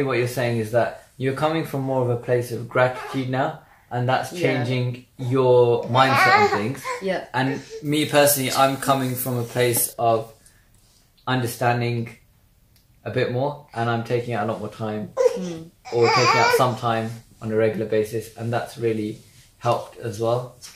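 From 7.85 to 9.93 s, pre-emphasis is left on: an FM-style 75 µs treble boost was never undone, lifting 10 kHz about 14 dB relative to 1 kHz. The sound turns thin, bright and sibilant, and the spectrogram shows upper bands abruptly brighter for that stretch.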